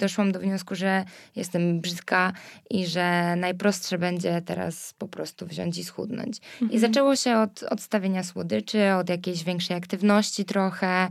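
Nothing in the speech recording points to a technical problem, as the signal holds steady throughout with no audible disturbance at any point.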